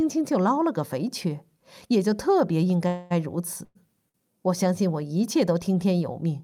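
A call audio freeze runs from 2.87 to 3.12 s: the last sound is carried on as a buzz or hiss that fades for about 231 ms, then the speech resumes exactly where it broke off, so nothing is lost but everything after is pushed later. A second call audio freeze follows at 3.64 to 3.77 s, about 106 ms of filled sound ending in roughly 10 ms of silence before the speech picks up again. Both likely come from packets held up in transit, leaving the jitter buffer empty until they arrived.

A short stall from a late packet occurs at 4.09 to 4.16 s. One packet was not there when due, so the receiver stretched the sound already playing for about 51 ms, heard as a held sound with a slight buzz or dip, then carried on from the same point with nothing missing.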